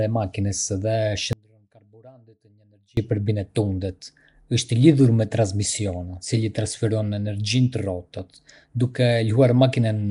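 From the first moment the speech carries a rough, hissy halo and a smeared, underwater quality, with nothing above 10.6 kHz. This is Nellymoser compression, likely from the old Flash microphone codec, whose coarse, fixed allocation fills weak bands with noise instead of detail. The damage is plainly audible and fits a rate near 44 kbps. The hiss sits inside the signal and moves with it, unlike steady background noise.

At 1.33 s the speech cuts out abruptly and returns at 2.97 s, just before "për bine". This is an audio dropout to a faint residue, about 1.64 s long. The wanted signal was likely lost upstream while the path after the break stayed live, so the gap holds only faint sound, about 35 dB below normal level. The hard edges on both sides and the faint sound rather than true silence set it apart from a natural pause or a fade.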